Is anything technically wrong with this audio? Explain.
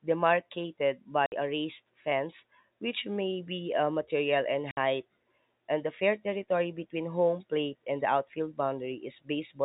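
Yes. The speech has two dropouts from packet loss filled with silence, at 1.26 to 1.32 s and again at 4.71 to 4.77 s. Each gap is 60 ms long, which fits two consecutive 30 ms packets going missing. The receiver had nothing to play for those slots and inserted digital silence, so the speech stops abruptly and restarts with hard edges. The telephone band limit at 4 kHz from the G.711 coding is heard throughout the clip.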